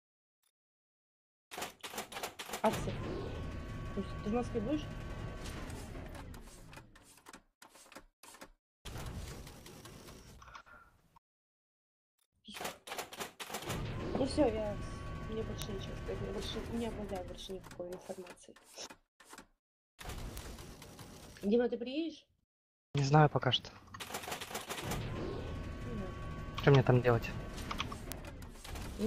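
Three isolated, sharp ticks cut through the audio at 15.62 s, 20.38 s and 28.12 s, each a broadband click with no relation to the surrounding sound. They peak at about -16 dBFS for the first two and about -10 dBFS for the last. These are bit error spikes: a flipped bit in memory or on a digital link throws one or two samples off by a power of two, and the signal snaps straight back on the next sample.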